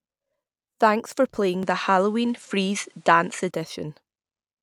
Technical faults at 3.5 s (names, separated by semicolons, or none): input switched to a poorer device